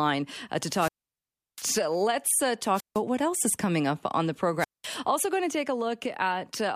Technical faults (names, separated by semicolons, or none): wireless microphone squelch dropout